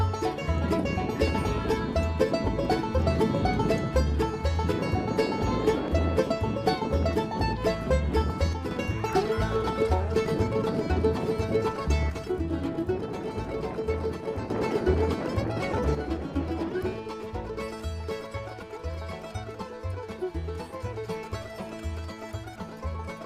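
A stereo channel is likely dropping out, so the mono sum loses half its contribution. From 8.53 to 8.71 s, again from 12.10 to 14.50 s, and from 15.95 s to the end, the level falls abruptly by about 6 dB. Each drop is a sudden step down rather than a fade, and the first two snap back just as sharply. This is one channel dropping out.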